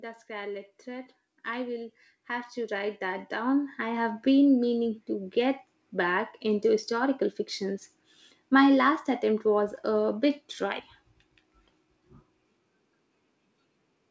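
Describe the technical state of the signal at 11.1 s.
At 11.1 s the signal is intact with no fault, carrying only the ordinary coding of the WebRTC call path, which leaves nothing audible above 8 kHz.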